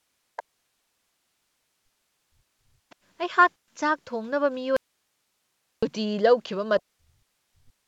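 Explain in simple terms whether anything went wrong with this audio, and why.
Several things go wrong here, in four different ways.

From the very start up to 2.66 s, the speech keeps sinking, at times almost to nothing, and it happens again from 6.79 to 7.36 s and from 7.6 s to the end. That's speech suppressed in double talk. Most likely both ends of the call were talking at once, and the echo canceller, unable to tell the talker apart from the other side's sound coming out of the loudspeaker, turned everything down together.

Around 2.9 s there's a brief, faint scrap of a second voice, lasting only a few hundredths of a second. That's the other side's voice leaking through. The talker's device was likely playing the far end on a speaker, and the echo canceller missed a small bit of it, so it slipped back into the microphone.

From 3.57 to 3.71 s there's a sharp-edged hole, about 120 ms of silence. 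This is packet loss on an ADPCM call. A short run of audio packets never arrived, and because this kind of coding predicts each bit of sound from the last, the decoder loses track. When the speech comes back, it can sound briefly off in level or a little rough before it settles.

From 4.77 to 5.83 s, the speech cuts out abruptly for about a second, leaving only faint hiss, then snaps back. That's an audio dropout to a faint residue. The signal itself was likely lost somewhere along the way, but the rest of the chain stayed switched on, so you hear its background hiss instead of proper silence. It doesn't sound like a natural pause or a fade.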